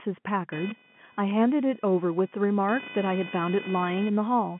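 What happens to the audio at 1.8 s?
At 1.8 s, computer activity noise is present, running from 0.52 s to the end of the clip at 4.6 s. Load changes in the processor, graphics card or mouse disturb the ground that the audio circuit shares with the computer, so the interference follows the machine's activity instead of the speech. It is heard as a rough, chirping buzz pulsing at around 500 Hz, roughly 15 dB below the speech, carried within the narrow telephone band.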